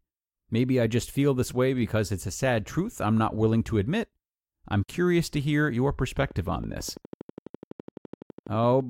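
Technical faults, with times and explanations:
6.23 to 8.81 s, train of clicks: just after "curious to hear your", a steady ticking of sharp, near-identical pops sets in at a regular 12 per second, about thirty in all, running to near the end and audible through the pauses as well as over the speech. Each click peaks at roughly the level of the speech itself, so it cuts through rather than hiding beneath it. The likely cause is interference from nearby equipment or a faulty connection or power supply injecting a repeating pulse.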